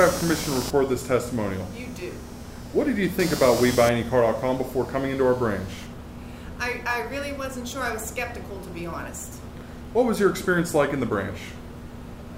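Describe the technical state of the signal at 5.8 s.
Computer activity noise is present at 5.8 s, within a span running from the start to 5.86 s. Processor, graphics or mouse load disturbs the shared audio ground, producing a buzzing pulse train around 200 per second, roughly 10 dB below the sound, rising and falling with that activity.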